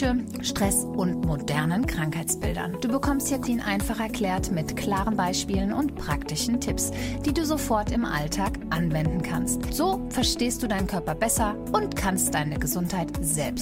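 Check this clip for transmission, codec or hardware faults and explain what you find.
Two transmission faults are audible: one skip ahead and three stretches of jitter buffer speed-up.

Skip ahead, 3.43 to 3.45 s: about a second of audio was discarded when queued material was already waiting, and playback joins the two sides with no fill. It sounds like an abrupt jump. The waveform shows a hard splice and the spectrogram a sudden content change.

Jitter buffer speed-up, 3.49 to 4.23 s (107%), 4.72 to 6.50 s (105%) and 9.85 to 11.26 s (104%): an overfilled buffer trimmed short pitch-period pieces repeatedly, removing about 50, 100 and 70 ms in total. The sound runs faster at unchanged pitch, hurried in the first two stretches. Harmonics stay level on the spectrogram while events compress in time.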